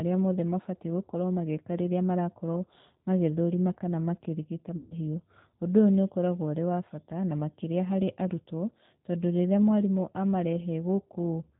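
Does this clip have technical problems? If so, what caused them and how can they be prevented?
Yes. G.729 codec, throughout: the sound is limited to below 4 kHz and has a plainly audible rough, slightly synthetic quality, because the 8 kbit/s coder rebuilds each 10 ms frame from a vocal-tract filter, a pitch predictor and a few pulses. A wideband codec such as G.722 or Opus avoids this.

VoIP packet loss concealed by the speech codec, 4.77 to 4.95 s, right after "marakorwo magĩthũrima kana makĩrigita": about 140 ms of audio went missing, which fits seven 20 ms packets. The decoder stretched its last pitch and filter into a buzzy tone or coloured noise that fades, and the sound stays weak briefly as frames rebuild. A jitter buffer, forward error correction and a more stable network prevent this.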